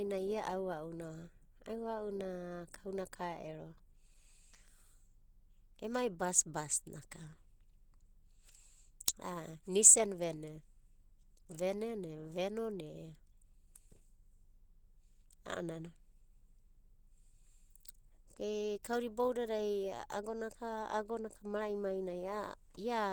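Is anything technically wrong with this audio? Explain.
Yes. Throughout the whole recording the speech carries plainly audible Opus compression damage, likely from a low-rate encode whose sound points to roughly 16 kbps in the codec's hybrid mode. At that budget the encoder cannot code every band accurately, so it fills bands with noise or folded copies of lower ones. The speech therefore sounds hoarse, grainy and rough rather than swirly, even though content still reaches about 20.2 kHz.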